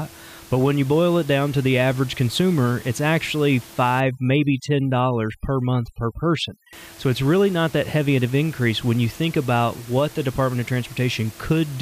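From 4.00 to 6.73 s, overdone noise removal strips frequency bands near the noise floor. The room noise, about 22 dB below speech, collapses into twinkling specks. Quiet parts of the speech are cut along with it.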